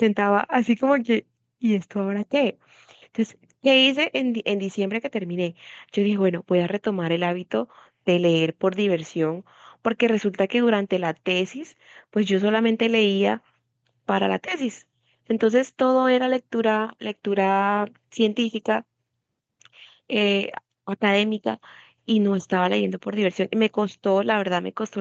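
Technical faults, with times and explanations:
No technical faults are present: the speech comes through the call microphone processing and WebRTC call path with its content ending at about 8 kHz, which fits a wideband call codec.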